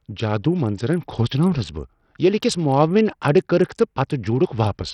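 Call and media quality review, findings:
Throughout: gritty grain and flickering treble on speech, nothing above 16.9 kHz; likely Bluetooth SBC compression near 64 kbps, top sub-bands starved of bits. Grit and aliasing, not the swirl of perceptual codecs.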